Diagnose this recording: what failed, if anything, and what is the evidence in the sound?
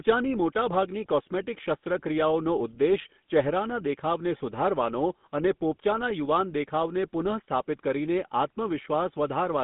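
The speech has a buzzy, gravelly roughness throughout, and nothing is heard below about 150 Hz or above 3.6 kHz. This points to the codec stage: the GSM full-rate codec, which fits 13 kbit/s, rebuilds the voice from a vocal-tract model driven by sparse regular pulses.

From 4.38 to 4.41 s the sound briefly freezes into a short metallic ring. This is network loss concealed by the codec. One lost GSM frame was filled by repeating the previous good frame's parameters.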